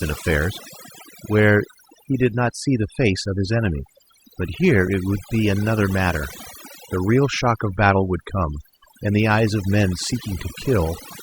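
Overdone noise removal runs through the whole speech recording. A noise reducer set far too hard pulls individual frequency bands down whenever they sit near its noise estimate, so the background drops and breaks up into twinkling specks, and the voice loses its quieter components as they vanish along with the noise.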